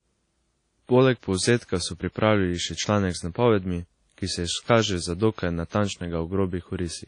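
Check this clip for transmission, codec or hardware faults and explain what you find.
There's one fault here, running the whole way through the speech: WMA compression damage, plainly audible, and most likely from an older WMA 1 encode at a low bitrate, something in the region of 32 kbps. The transform codec's long blocks smear quantisation noise over tens of milliseconds, so you get a ringing, washy quality and a hiss that swells and fades with the signal. Weak detail has been thrown away, and there's nothing above 10 kHz.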